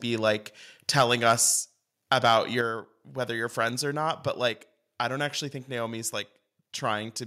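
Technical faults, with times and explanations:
0.98–1.32 s and 2.11–2.34 s, microphone overload: input level was likely too high, pushing peaks about 5 dB and about 3 dB past the converter's limit, flattening their tops into a harsh crackle on the loudest syllables.
1.02 s and 2.61 s, microphone volume stepped down: software likely lowered the input volume in single steps, about 2 dB then about 5 dB, so speech and background drop abruptly, the second just before "whether you're friends or".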